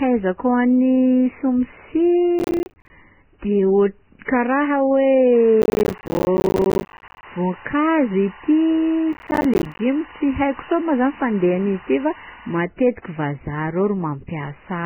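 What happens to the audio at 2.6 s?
From 2.39 to 2.9 s the speech is broken up by processor overload crackle. The processor repeatedly misses its deadlines for the small audio buffers, and each miss is filled with silence, leaving a hard-edged dropout. The spacing points to buffers of about 10 ms, with roughly thirty of them lost over that half-second. The result is a gritty, tearing crackle laid over the speech that stops once the load clears at 2.9 s.

Underneath this, and across the whole clip, is what is likely Vorbis compression at a very low bitrate. Nothing is present above 3 kHz, and the remaining band is heavily damaged by coarse quantisation: fine spectral detail has turned into grainy, hissy noise of similar energy, tones sound roughened and consonant onsets are smeared. At 2.6 s this codec damage and the crackle are both present together.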